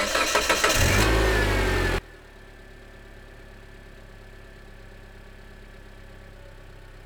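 An everyday sound recording where one channel inverted is the likely cause: from 1.98 s to the end, mono playback drops by about 21 dB as shared content cancels.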